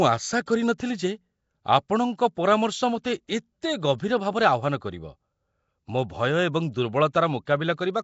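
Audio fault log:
throughout: Nellymoser compression, likely. The speech has a rough, hissy halo and a smeared, underwater quality, and nothing is present above 7.7 kHz. The plainly audible damage fits a rate of about 32 kbps.
0.46 s, 3.98 s, 7.45 s: pre-echo. A brief hiss of 13, 14 and 17 ms precedes each sharp attack, because block-wide quantisation noise leaks into the quiet moment before it.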